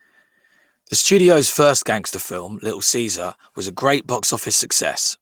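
Speech recording with no audible technical faults.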